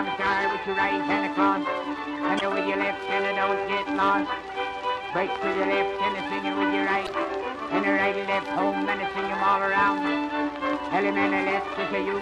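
At 2.37 to 2.41 s and again at 7.04 to 7.09 s, the audio shows damaged data in a compressed stream. Part of the encoded data was corrupted, so the decoder could not read those frames correctly, lost its place, and had to search for the next valid frame header before normal decoding resumed. Each event lasts roughly 40 ms and is heard as a brief, harsh blip or squawk that breaks into the sound.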